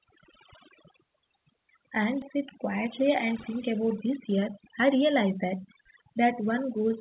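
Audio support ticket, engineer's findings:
Overdone noise removal, whole clip: background dropped, with twinkling specks. Noise suppressor set too aggressive, gating bands near its noise estimate. Spectrogram shows isolated tonal speckles in dark gaps and ragged, hollowed-out harmonics below the 4 kHz band edge.

Skip ahead, 2.22–2.24 s: playback jumps forward with no gap, roughly a second of speech missing, both sides butted together. Probably jitter buffer overflow discarding queued audio. Waveform shows an abrupt envelope discontinuity. Spectrogram shows a hard vertical seam with mismatched formants.

Jitter buffer speed-up, 2.36–6.98 s: speech runs at 108% with unchanged pitch and sounds hurried. The buffer is draining excess delay by cutting pitch-period-length pieces, about 0.4 s in total. Waveform shows compressed syllable spacing. Spectrogram shows harmonics unshifted but shorter phonemes.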